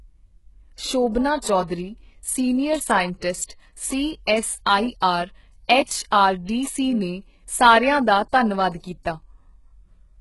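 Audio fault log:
Throughout, HE-AAC compression: the speech has heavy codec damage, with no content above about 11.5 kHz and a treble that sounds synthetic rather than recorded. The likely cause is a low-bitrate HE-AAC encode at around 12 kbps, where only the lower band is coded and the upper band is regenerated by copying lower bands upward under a coarse envelope. Those copied harmonics do not line up with the real ones, so sibilants come out gritty, metallic and lispy.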